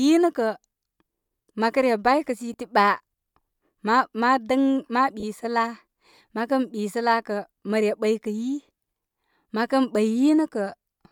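A brief noisy smear at 2.53 s, and a longer one from 5.20 to 5.23 s, briefly replace the speech's tonal detail. These are lost LE Audio frames: the LC3 decoder filled each gap by repeating the last spectrum with random signs, which fits 10 ms and three 10 ms frames missing.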